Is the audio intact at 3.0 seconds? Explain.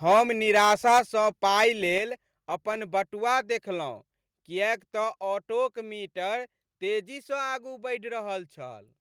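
Yes, the speech at 3.0 seconds is intact, with no fault audible at that moment.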